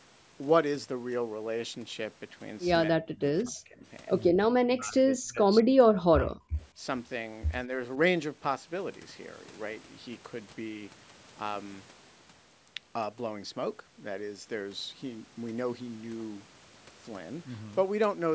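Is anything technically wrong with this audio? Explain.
Yes. The speech is suppressed in double talk, with dips at 3.04–3.84 s, 4.31–5.68 s, 5.86–5.92 s, 6.11–6.59 s, 6.75–6.86 s and 7.67–7.71 s. The level sinks by roughly 25 to 40 dB in the deeper dips and only slightly at 7.67 s. The likely cause is an echo canceller that heard the far side at the same time and pulled the near talker down with the echo. Packet loss would leave clean gaps, but here the sound fades in uneven pieces.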